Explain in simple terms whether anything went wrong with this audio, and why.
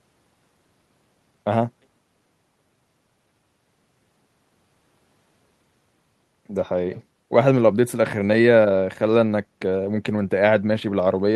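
Nothing went wrong with this audio; the speech comes through without any technical fault to point to.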